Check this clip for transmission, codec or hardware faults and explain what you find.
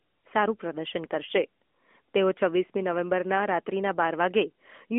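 No transmission, codec or hardware faults turn up anywhere in the speech.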